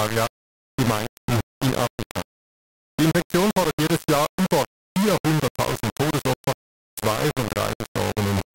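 From start to finish the speech is coated in a harsh, grainy distortion that moves with the talker, thickening on every syllable, while the quieter tails fall away to silence or break into a rough sputter. The error sits nearly as loud as the speech itself. This is low bit depth without dither: the likely cause is the audio being rounded to just 3 bits with no dither, so every sample snaps to a handful of coarse steps.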